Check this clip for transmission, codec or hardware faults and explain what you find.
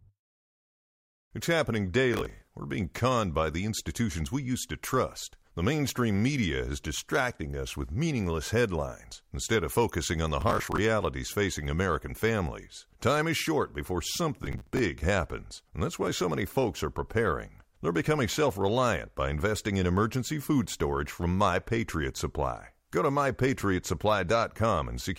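Three short bursts of processor overload crackle break up the speech. A gritty, tearing crackle rides over the sound at 2.14 to 2.48 s, at 10.41 to 10.78 s just after "of focusing on the", and at 14.42 to 14.79 s, between "is short before" and "happens and that's why". The processor is falling behind and missing a run of deadlines for small buffers of around 10 ms. Each missed slot replays old audio with hard edges, which fits something like fifteen to twenty misses in each burst.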